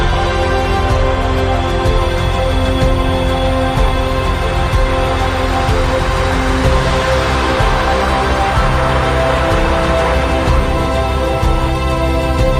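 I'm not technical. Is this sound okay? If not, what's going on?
No. From about 1.97 seconds right through to the end there's a thin, high whistle sitting underneath the sound. That's a switching supply whistle: a power adapter or the electronics powering the recording gear buzzing at a pitch high enough to hear. Here it's around 4.5 kHz, wandering slightly between about 4.45 and 4.57 kHz. It's fairly quiet.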